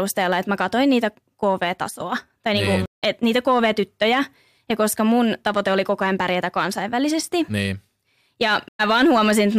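At 2.86 s, just after "tai niin", the speech drops to about 160 ms of silence and resumes at 3.03 s at "et niitä", roughly 150 ms further on, so a short stretch is simply gone. The same happens at 8.68 s, with about 110 ms of silence ending at 8.80 s and about a tenth of a second skipped. Both are stream reconnects: the connection broke, the player reconnected and restarted decoding from a later point in the live stream.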